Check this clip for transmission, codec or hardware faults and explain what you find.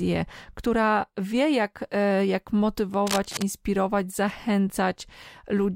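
There is one hardware fault: cable scratch noise. From 3.07 to 3.44 s, just after "wie jak e jak", a dense burst of uneven scratching noise sits over the speech, at about 10 dB below it. This is likely from a worn cable or connector shifting, its contact resistance changing rapidly.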